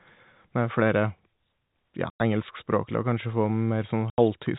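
Packet loss filled with silence at 2.1–2.2 s and 4.1–4.18 s: 100 ms, then 80 ms, of the telephone-band speech never arrived, so the receiver played dead silence. Each hole opens and closes abruptly, and both lengths fit 10 ms packets.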